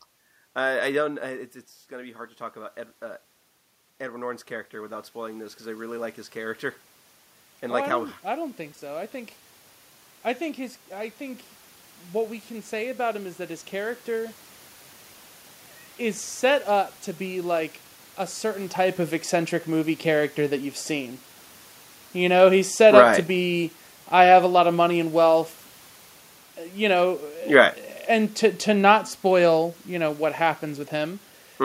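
Automatic gain rising runs from 1.01 s, after "I I", to 17.5 s: the level at the microphone drops by about 10 dB as the talker moves back, and the gain control slowly compensates with about 15 dB of boost, so voice and room noise swell together. Automatic gain falling follows from 22.82 s, after "know he's", until 29.65 s, just before "you know what": the input reads too loud, or its background too strong for the gain it started with, and the control eases the gain down by about 3 dB, sinking speech and background as one.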